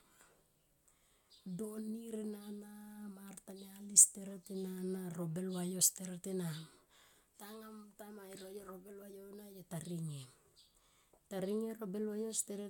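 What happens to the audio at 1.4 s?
Nothing goes wrong at 1.4 s: the speech there runs on cleanly, with no dropout, click, distortion or other fault to be heard.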